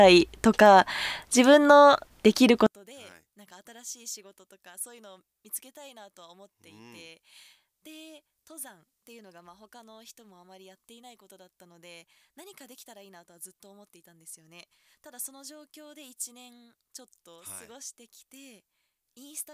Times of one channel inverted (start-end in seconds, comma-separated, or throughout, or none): 2.67-19.53